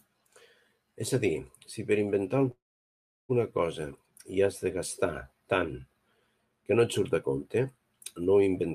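At 2.51 s, right after "dir si per inventar", the speech stalls in a call audio freeze lasting about 0.8 s, until 3.31 s. The last sound is briefly stretched and then drops to silence for roughly 0.7 s, most likely because packets arrived late and the jitter buffer ran dry. Playback resumes at "cosa hi has de" exactly where it stopped, so nothing is lost, but the rest of the clip now runs about 775 ms later.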